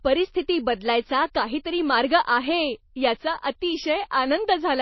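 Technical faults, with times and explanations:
Throughout, MP3 compression: the speech has nothing above about 5.8 kHz and a watery, swirling texture, with metallic chirps on s sounds and smeared onsets. That likely comes from a low-bitrate MP3 encode near 24 kbps. A plain low-pass filter would dull the speech without the swirling.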